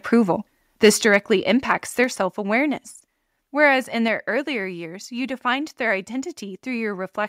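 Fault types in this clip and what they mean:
Microphone overload: Between 0.84 and 1.15 s the loudest peaks are flattened and take on a harsh, crackly edge, likely from input gain driving the converter about 4 dB past its limit. The waveform shows squared-off tops on a small share of samples, and the spectrogram shows broadband smear above the speech.
Microphone volume stepped down: Speech and background drop abruptly in level at 1.02 s, 2.04 s and 4.08 s, by about 5, 3 and 3 dB, likely the call software cutting input volume after the overload. The waveform envelope shrinks in distinct steps, and the spectrogram dims at each point.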